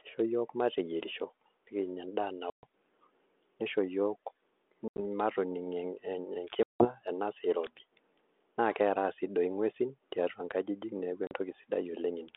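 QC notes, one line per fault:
2.50–2.66 s, 4.88–5.00 s, 6.63–6.88 s, 11.27–11.32 s: packet loss on an ADPCM call. After "yiok mateyierisho nikinya endaa", hard-edged silent gaps of 130 ms, then 90 ms in scattered pieces (longest 80 ms), 170 ms before "enasaa irobi", and 40 ms after "nkajijik neeku". The 32 kbit/s G.726 decoder's adaptive predictor and step size drift from the sender's, so speech resumes slightly distorted and settles within tens of milliseconds.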